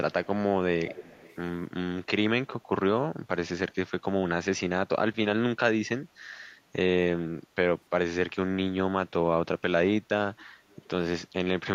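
This is speech with echo leak, likely from a loudspeaker on the far end whose echo canceller let part of the played-back call return. Delayed copies, roughly 270 to 300 ms late, surface at 0.12–0.28 s, 0.86–1.36 s (strongest, around 15 dB down), 10.39–10.45 s and 10.69–10.76 s.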